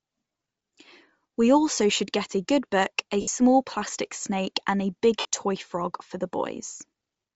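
From start to finish the speech carries a grainy, breathy edge, likely Bluetooth LC3 compression at a low bitrate around 32 kbps; a spectrogram shows noise-filled patches across the upper band. At 3.21–3.28 s and 5.19–5.25 s, lost LE Audio frames leave roughly 68 ms and 53 ms gaps where the decoder repeated scrambled spectra. These are heard as brief noisy smears, with blurred, fading texture on the spectrogram and a shapeless waveform.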